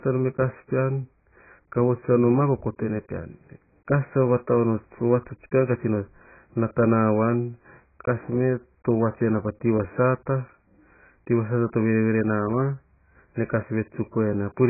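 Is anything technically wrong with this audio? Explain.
Yes. Throughout the speech there is heavy AAC compression damage, likely from AAC-LC at a starved bitrate near 12 kbps. With too few bits, the encoder discards everything above 2.5 kHz and quantises the rest coarsely, leaving dull, smeared sibilants with a warbling texture. A simple low-pass filter would sound muffled but clean, without that swirl.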